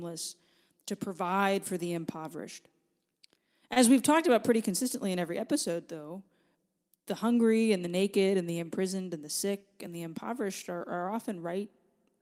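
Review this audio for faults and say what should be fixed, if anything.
At 3.73 to 3.78 s the speech briefly sticks, one sound held a touch too long with a faint buzz or dip. This is a short stall from a late packet: the jitter buffer ran dry, the receiver stretched about 25 ms, then resumed without losing anything, leaving playback 25 ms later. A slightly deeper or adaptive jitter buffer would absorb late arrivals like this one.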